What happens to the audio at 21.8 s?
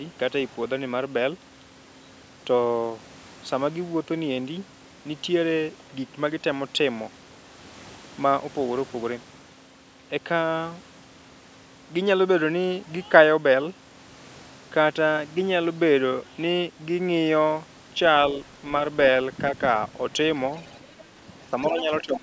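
Around 21.8 s, two faults overlap at the very end of the speech. From 21.65 to 21.82 s the other side's voice is leaking through: a faint second voice sits roughly 15 dB below the main talker, likely loudspeaker sound that the echo canceller failed to fully remove from the microphone. On a spectrogram it shows as a weak second set of harmonic striations layered under the main ones. In the waveform it adds only a small ripple.

From 21.7 s to the end of the clip at 22.23 s, the speech is suppressed in double talk. The talker's level dips by as much as about 10 dB over roughly four tenths of a second, likely because the canceller could not separate the near talker from the echo and turned both down. The waveform envelope visibly sags and the spectrogram shows the voice weaker over that stretch. It sounds like the voice dipping in level.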